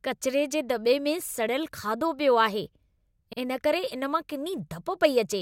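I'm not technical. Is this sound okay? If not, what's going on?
No. The speech has overlapping chunks. It was handled in pieces about 2 seconds long, and each piece starts slightly before the last one ended. So about 50 ms plays twice, a small stutter at 1.28 s, after "कचिरे जे दॿे में", and at 3.33 s, before "इन करे".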